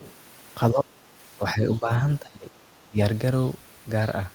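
From the very start to 0.13 s, a faint second voice sits underneath the speech, roughly 25 dB below it, and brief. This is the other side's voice leaking through, most likely because the talker's loudspeaker played the far end into the microphone and the echo canceller left a remnant of it in the outgoing signal.

Four times the speech then sags while, presumably, the far end is talking too. From 0.72 to 0.85 s it drops by about 10 dB. From 1.37 to 1.9 s there is only a slight dip of a few decibels. From 2.21 to 2.52 s it nearly vanishes, down by around 25 dB. From 2.8 to 2.98 s it falls by about 20 dB. This pattern is speech suppressed in double talk. The echo canceller could not tell the local talker apart from the loudspeaker echo, so it likely turned everything down together.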